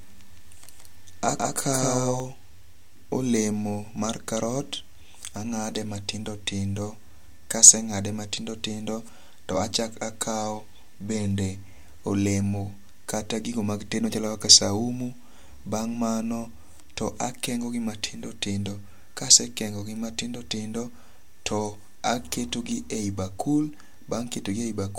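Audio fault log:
0.0–2.2 s, doubled audio track: The speech is already doubled when the clip begins. A second full-band copy trails the first by roughly 150 ms at about the same loudness, producing a hard slapback with no decay or room colouring. The copy cuts off abruptly at 2.2 s, leaving the single track. Likely cause: the signal is being captured twice, once through a slower path, or an edit has left two out-of-step copies overlapping.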